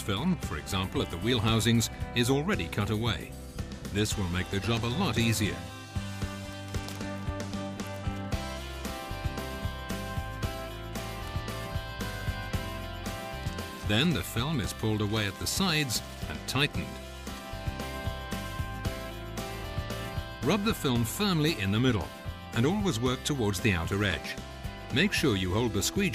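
No technical faults are audible.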